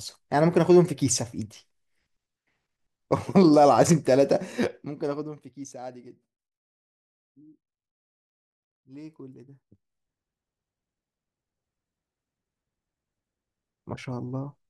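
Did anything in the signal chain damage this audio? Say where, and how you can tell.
Yes. From 4.46 to 5.58 s the level drops by about 20 dB with a ticking laid over the speech, and from 9.38 to 9.98 s it rises by about 20 dB with a faster zipping. This is zipper noise from a gain stage at the buffer level. The gain moves in unsmoothed 2 dB steps, around seven per second on the way down and about fifteen on the way up, and each jump clicks. The clicks track only the level moves, unlike dropout or clipping clicks.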